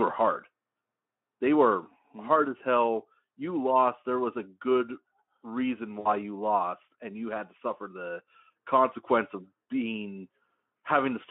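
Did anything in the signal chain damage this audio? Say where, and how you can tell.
Yes. At the network stage, VoIP packet loss concealed by the speech codec: at 6.00 to 6.08 s, after "was a good reason", and at 9.63 to 9.65 s, after "suffer the consequence of", the decoder filled the gaps from its last pitch and filter, leaving a brief buzzy or noisy smear that fades.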